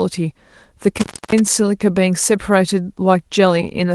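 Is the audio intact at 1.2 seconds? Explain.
No. An intermittent contact disrupts 0.97 to 1.39 s: a loose connection opens for about 0.29 s, cutting the speech out with crackle at the edges and faint hiss in the gap.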